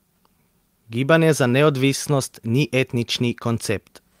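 Clock drift between sender and receiver runs through this speech clip: the sender's clock is about 1.5% slow, so the receiver's jitter buffer keeps draining and must be refilled. Repeated timing corrections from 0.08 to 3.83 s stretch the audio to 98% speed, adding roughly 70 ms through small repeated pieces.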